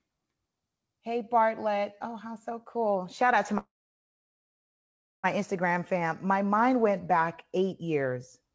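Speech from a call, where the audio stalls right after "out to" with a call audio freeze from 3.58 to 5.26 s. A brief fading continuation of the last sound gives way to about 1.5 s of near-silence, then the talk resumes where it left off, so nothing is lost but everything after arrives about 1.66 s late. The likely cause is delayed packets draining the jitter buffer. On a spectrogram it shows as a short smeared tail, then a blank band across all frequencies up to the 8 kHz ceiling of the G.722 coding. The waveform flattens over the same span.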